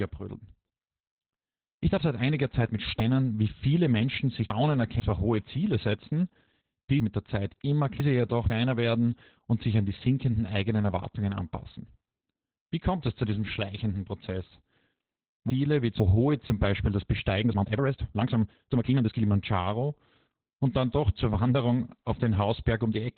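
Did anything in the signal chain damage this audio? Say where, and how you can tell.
Yes. Throughout, the speech is muffled, hoarse and slightly robotic, with nothing above about 4.3 kHz. That fits Opus voice compression in narrowband SILK mode at roughly 8 kbps.

Jumbled chunks out of order at 3.0–5.0 s (before "zwar hohe"), 7.0–8.5 s (before "werden und sich an") and 15.5–16.5 s. A buffer played 500 ms blocks late.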